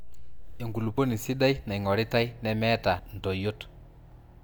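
Compressed frames skipped at 0.98 s and 2.99 s: the speech jumps ahead by roughly 30 ms, then roughly 70 ms, which fits one and then two lost 32 ms frames.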